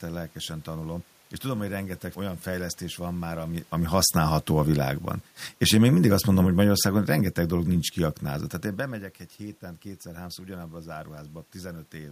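From 3.75 to 7.49 s the automatic gain is falling: the control judges the input too loud, or its background noise too strong, and eases its gain down by about 6 dB. Speech and room noise sink together, so the waveform envelope and the spectrogram's background tint both taper across that stretch.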